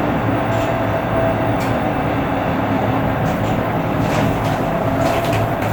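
A recording of everyday sound with a call bitrate drop from 2.99 s to the end, as the call's bandwidth estimate collapsed and the encoder was starved of bits. The shift to a coarse, dull sound points to a fall from around 128 kbps to about 20 kbps, lasting roughly 1.9 s at its lowest. The audio turns rough and watery, with the top end cut away.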